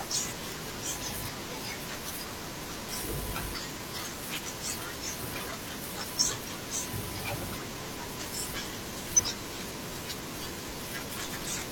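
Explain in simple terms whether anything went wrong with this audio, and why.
The speech jumps ahead five times, at 0.28, 2.88, 6.59, 9.15 and 11.29 s. These are compressed frames skipped. Whole chunks of about 43 ms each never play. The longest gap, at 9.15 s, loses about a third of a second.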